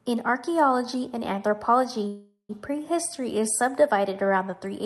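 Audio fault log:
2.07–2.51 s, call audio freeze: the sound stalls, its last moment stretched into a fading buzz for about 0.42 s and ending in about 0.1 s of silence. It then resumes exactly where it stopped with nothing lost, likely because delayed packets emptied the jitter buffer.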